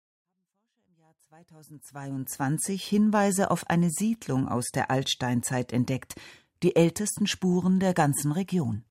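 Nothing here sounds like a technical fault; the speech simply eases in with a smooth fade over roughly the first 2.5 seconds and carries on from there.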